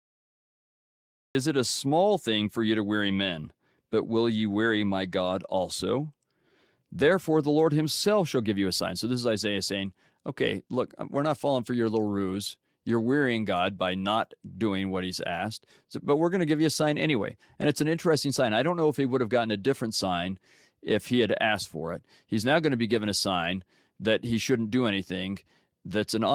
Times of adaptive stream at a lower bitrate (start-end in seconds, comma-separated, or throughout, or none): none